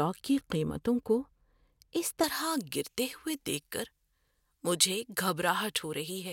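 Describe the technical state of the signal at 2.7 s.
Pre-emphasis left on covers 2.7 s, running from 2.24 s to the end. The treble boost was never undone by the matching cut, leaving about 11 dB extra at 10 kHz relative to 1 kHz, which fits a J.17 curve. The speech sounds thin, bright and sibilant.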